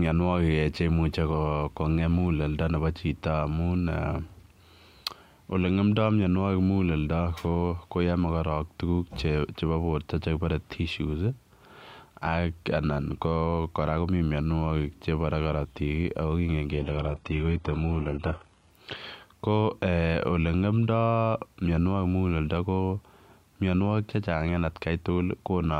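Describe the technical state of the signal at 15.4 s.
At 15.4 s the speech signal is intact, with no audible fault at that moment.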